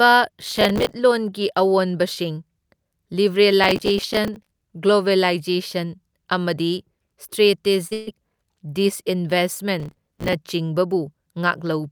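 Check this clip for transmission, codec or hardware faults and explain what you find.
Three kinds of fault appear: repeated processor overload crackle and, just before 8 seconds, a short concealed packet loss followed immediately by a burst of packet loss.

The speech picks up a gritty, tearing crackle from 0.42 to 0.95 s, again from 3.64 to 4.61 s, and from 9.80 to 10.33 s. This is processor overload crackle. The device couldn't finish its audio buffers on time, each only a few milliseconds long, and dozens of deadlines were missed in each stretch. Every miss replayed a hard-edged scrap of old audio, and together those scraps form the crackle, which clears once the load drops.

From 7.87 to 7.93 s there is a brief smear where the sound wobbles rather than carrying on cleanly. This is a short concealed packet loss. About 40 ms of the stream never reached the decoder in time, and the receiver covered 36 ms of it by extending the last sound before blending back into real audio. 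The smear marks that patch.

Straight after, from 7.93 to 8.09 s, the sound turns into a held, fading continuation before speech resumes further along. This is a burst of packet loss. About 140 ms of consecutive audio was lost, and the receiver filled 138 ms of it by stretching the last sound and letting it decay, with no outright silence. The speech therefore jumps ahead, and whatever fell inside that gap is missing.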